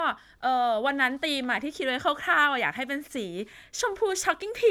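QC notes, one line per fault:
Nothing to log on this one, as there are no faults to note anywhere in the speech.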